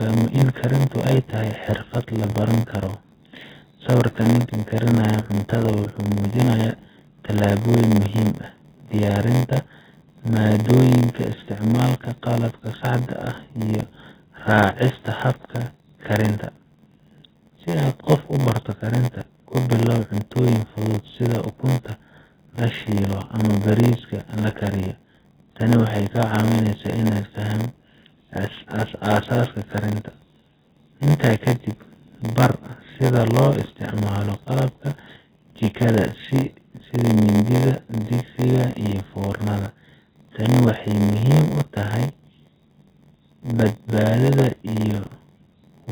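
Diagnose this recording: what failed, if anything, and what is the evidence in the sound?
The speech is dull and smeared throughout, with a fizzy, warbling edge on sibilants. A spectrogram shows a lowered ceiling and patchy holes below it. This is codec-stage AAC compression, likely AAC-LC starved at around 16 kbps.

A steady 86.1 Hz buzz runs the whole length, and the speech plays about 0.938 times its normal speed with its timbre unchanged. This is a block size mismatch (padded) at the driver or buffer stage. A writer fills short blocks into a reader that fits a 512-sample buffer, and zeros pad the remainder. The waveform shows tiny flat gaps at that rate.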